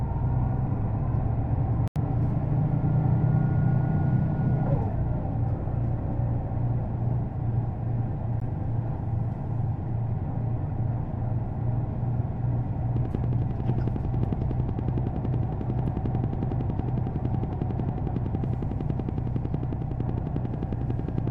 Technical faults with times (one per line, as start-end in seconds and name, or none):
1.88-1.96 Bluetooth stall
8.40 Bluetooth stall
12.96-21.28 train of clicks